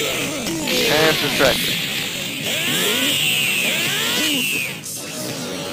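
From the start to 2.33 s the audio carries buffer tearing: the writer and the hardware reader of the ring buffer have drifted out of step and cross inside every period, so a small slice of each buffer, a few percent, is stale material from about 40 ms earlier, spliced in with hard edges. The result is a steady robotic buzz at 46.9 Hz, which fits a 1024-sample buffer, riding on the sound wherever signal is present.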